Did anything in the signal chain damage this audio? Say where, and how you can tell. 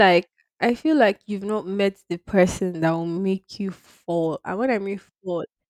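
No, nothing in the signal chain audibly damaged this speech recording; the signal stays intact and continuous at every stage, with no audible disturbance introduced anywhere along the way.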